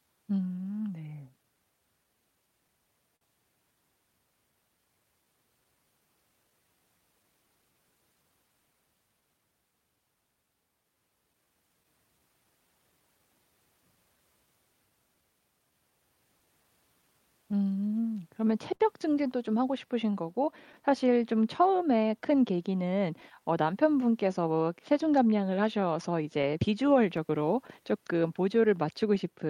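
Clock drift between sender and receiver runs through the whole recording: the sending device's audio clock runs roughly 4 percent slower than the receiver's, so the receiver's jitter buffer keeps draining. To avoid running dry, the receiver makes repeated timing corrections from 0.06 s to 29.31 s, repeating short slices of the speech so that playback runs at about 97 percent of real pace. Together these stretch the clip by around a second. Each individual edit is tiny and unevenly spaced, so the result, if heard at all, is a slightly uneven tempo with occasional small hiccups rather than any single obvious jump.

Scattered short gaps appear on top of this, where individual packets arrived late or went missing and the receiver bridged each hole by extending the last bit of sound. From 1.43 s to 3.23 s there are about three such patches, roughly 70 ms concealed in total, the longest around 50 ms.

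Between 10.83 s and 11.86 s another three or so occur, much shorter at around 30 ms altogether, the longest about 10 ms. From 17.02 s to 18.82 s the pattern of the first cluster returns: about three gaps, roughly 70 ms filled, the longest near 50 ms.

From 20.72 s to 29.18 s the losses become more frequent but smaller. About fifteen gaps of no more than about 15 ms each add up to roughly 100 ms, spread thinly across the stretch.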